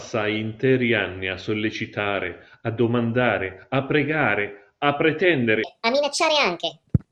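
From 5.64 s to the end, the speech plays back at the wrong speed, about 1.62 times fast, so it jumps roughly seven semitones higher and sounds hurried, likely from a clock mismatch.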